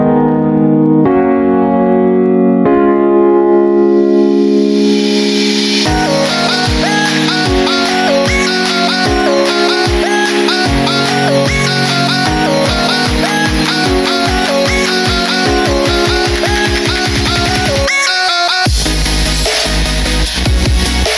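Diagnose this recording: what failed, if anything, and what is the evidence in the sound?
Nothing failed: the recording shows no audible evidence of a fault at any stage.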